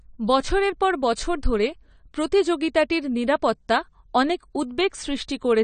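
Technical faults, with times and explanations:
Throughout, AAC compression: the speech sounds dull and smeared, with nothing above 9 kHz and a warbling, fizzy texture. This is likely low-bitrate AAC-LC, which quantises each frame's spectrum coarsely, dropping the top band and leaving gaps. The damage fits about 32 kbps.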